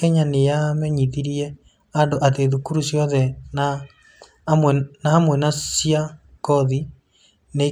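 Nothing goes wrong anywhere in this bit of speech, so there's no fault to point to.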